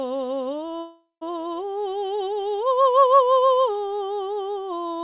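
A long network dropout runs from 0.80 to 1.23 s. The music gives way to a fading buzz as the receiver stretches its last sound, then 140 ms of silence, likely because packets stopped arriving. The music resumes with 420 ms lost.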